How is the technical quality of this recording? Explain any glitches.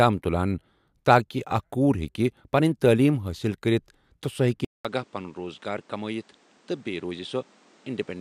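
The recording has one glitch. At 4.65 s the input likely switched to a poorer device. After a 0.2 s silence the speech stays duller to the end, with a narrower band, about 5 dB quieter, with new noise about 30 dB below it.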